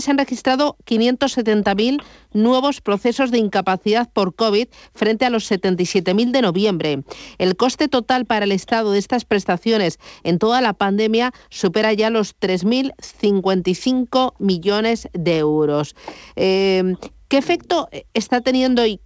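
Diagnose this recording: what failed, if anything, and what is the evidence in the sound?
Nothing failed in this recording: the speech arrives over a wideband call path with no content above 8 kHz, which fits G.722 at 64 kbps.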